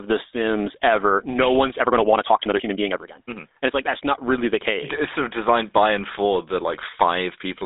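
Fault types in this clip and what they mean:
GSM full-rate codec: The whole clip carries the buzzy, gravelly roughness of the original GSM speech codec. It models the vocal tract and drives it with a sparse, regularly spaced pulse excitation, which at this codec's 13 kbps leaves plainly audible damage. The sound is confined to a telephone band of roughly 300 Hz to 3.7 kHz, and nothing reaches above 3.8 kHz, so the speech sounds narrow and lacks air and sibilance.
time-stretched section: From 1.77 s, after "sims ever no one's", until 3.89 s, where "not really the case" follows, the speech suddenly runs about 1.57 times faster while its pitch stays unchanged. This sounds rushed, as if short pieces of the audio had been dropped to shorten the passage without raising its pitch. The likely cause is software squeezing that section to fit a shorter length.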